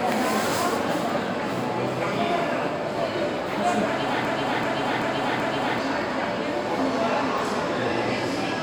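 From 4.25 s to 5.78 s a fragment of about 0.38 s repeats exactly, back to back, four times, like a stuck record. This is a broken-record loop, likely from the player or stream stalling and resending its last held fragment, so the audio meant for that stretch is lost.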